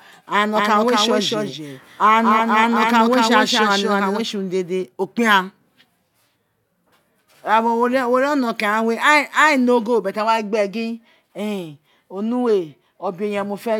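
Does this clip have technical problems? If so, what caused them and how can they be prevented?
Yes. From 0.56 s to 4.22 s there is a doubled audio track: a second full-band copy of the speech trails the original by about a fifth of a second, a few decibels quieter, with no reverb tail, and it cuts off abruptly just before "tse urun dede o". On a waveform or spectrogram, every syllable shows a dry, slightly fainter twin shifted right by that fixed gap. The likely cause is the signal being captured twice, once through a slower path. Monitoring inputs so only one capture path feeds the recording prevents this.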